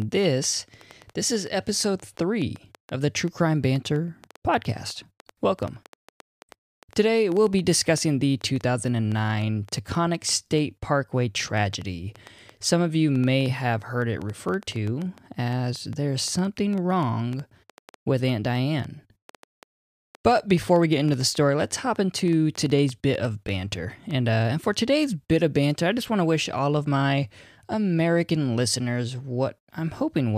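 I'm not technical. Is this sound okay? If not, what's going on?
No. Something is likely injecting electrical pulses into the recording, perhaps interference from nearby equipment or a faulty connection or power supply. The result is a train of clicks: from 0.02 s to 24.1 s, about five sharp ticks a second at an uneven pace, roughly 150 in all, audible over the speech and its pauses.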